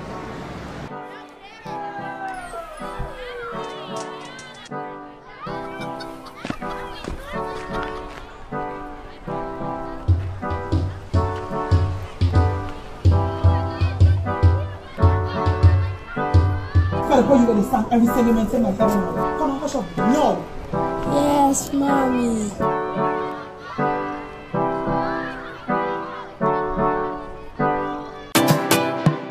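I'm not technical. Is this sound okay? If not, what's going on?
Yes, the sound is technically fine and has no audible faults anywhere in the recording.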